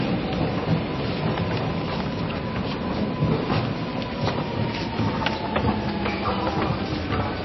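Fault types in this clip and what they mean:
Low-bitrate audio saved at a high bitrate: the audio is dull and muffled throughout, with nothing above about 5.8 kHz and smeared, watery MP3 artefacts. This is likely a very low-bitrate MP3 re-encoded at a much higher bitrate, which kept the damage without restoring anything.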